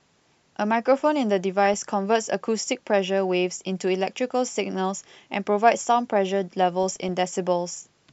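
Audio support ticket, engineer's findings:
DAB burbling at 1.59–1.80 s, 4.63–4.75 s and 6.83–7.09 s. Short noise blips in single sub-bands over speech. Weak-reception bit errors, a fraction of a percent, getting past error correction into MP2 data. Corrupted scale factors make single sub-bands jump for up to a frame; 13, 5 and 14 frames hit per burst.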